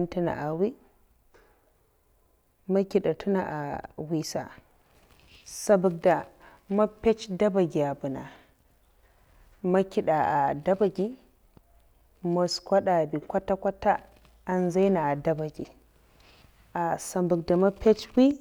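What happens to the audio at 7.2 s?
Nothing goes wrong at 7.2 s; the speech carries on intact through that moment, with no dropout, click or distortion to be heard.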